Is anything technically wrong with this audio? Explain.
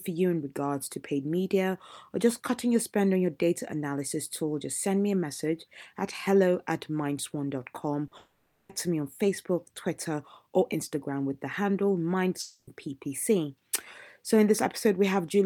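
Yes, there are three gaps in the speech where audio was lost and patched over.

At 8.07 to 8.13 s there is a short concealed packet loss. About 40 ms of the stream failed to arrive in time, so the decoder extended the preceding sound to bridge the hole and then blended back into the real audio. It is heard as a brief smear or wobble. What separates it from a dropout is its length: it is far too short for the synthesized fill to decay, so there is no fade and no silence.

At 8.17 to 8.71 s and again at 12.41 to 12.69 s the sound trails off into a fading buzz or hiss and then goes briefly quiet before the speech returns. The likely cause is a long network dropout: roughly half a second of audio in the first case and about a quarter second in the second never arrived. The receiver kept synthesizing the last sound until it decayed, leaving about 10 ms and 30 ms of silence respectively. Unlike the short loss, these gaps are long enough that the fill audibly fades out and the lost stretch is simply skipped.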